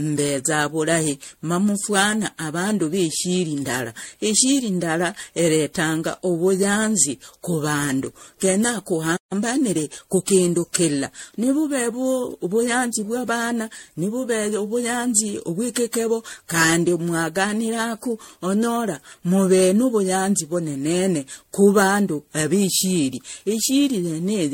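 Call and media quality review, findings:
Generation loss throughout: swirly, smeared, hollow speech, blurred attacks, nothing above 16.6 kHz; likely repeated MP3 re-encoding at 64 kbit/s, around seven passes. Worse than one encode at that bitrate.

Playback stall, 9.16 to 9.33 s: speech drops to silence for about 145 ms, then resumes. Likely buffer underrun or blocked player thread. True silence, not packet-loss concealment.

Time-compressed catch-up, 9.33 to 10.29 s: speech hurried to 1.15x, pitch unchanged. Player trimming backlog after the stall. Unchanged pitch rules out resampling speed-up.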